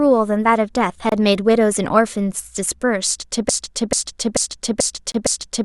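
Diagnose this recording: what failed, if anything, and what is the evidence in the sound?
A gap between stream segments appears at the streaming stage: hard-edged silences of about 26 ms at 1.09 s and 25 ms at 5.12 s. Their 4-second spacing fits mismatched segment timestamps that the player pads with silence.

A broken-record loop appears at playback or streaming. From 3.49 s to the end, a 0.44 s fragment repeats back to back. The likely cause is a stalled stream resending its last buffer, so the intended audio is lost.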